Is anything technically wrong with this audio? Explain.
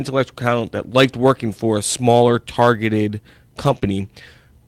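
Yes. There are two network-loss faults near the end of this speech clip.

From 3.63 to 3.77 s, right after "for a smaller targeted", there is a lost packet rebuilt from error correction. The sound points to several separate lost packets. Each following packet carried a low-bitrate copy, so the decoder played about 80 ms of those copies instead. There is no gap, but the passage sounds rougher and noisier.

At 3.79 to 3.83 s there is a short concealed packet loss. About 20 ms never arrived in time. The receiver extended the preceding sound to fill the hole, then blended back into the real signal. It comes across as a brief smear or wobble.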